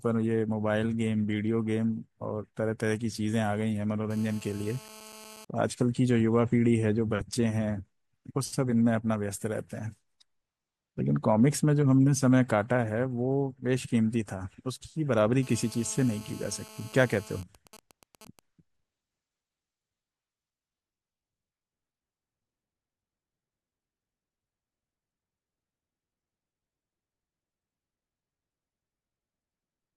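From 4.11 to 5.45 s and again from 15.43 to 17.42 s there's GSM phone buzz: a harsh, raspy 217 Hz drone full of harmonics, about 22 dB below the speech. A nearby 2G phone in a call is bursting, and the audio circuitry is rectifying those radio pulses.

Right after, from 17.43 to 18.39 s, it turns into GSM signalling bursts, even ticks with a longer 217 Hz buzz twice a second at roughly 20 dB down. The phone is still in the call, but its user has gone quiet, so it's only sending short groups of bursts.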